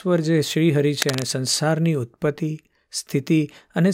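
From 1.00 to 1.23 s, a burst of cable scratch noise rasps over the speech, nearly as loud as the voice. It is likely a worn cable or connector being moved, its contact resistance flickering. Dense, uneven rustling sets it apart from isolated clicks or crackle.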